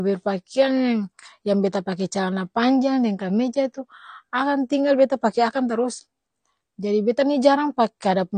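From start to finish the speech carries plainly audible codec damage, most likely AAC compression. Nothing reaches above 9 kHz, so sibilants sound dull, and the remaining spectrum has a smeared, warbling quality with fizzy texture on sustained sounds, which fits a low bitrate around 32 kbps. What separates this from a plain low-pass filter is that warble and fizz: a filter would only dull the top, while this coder also degrades what remains below the cut-off.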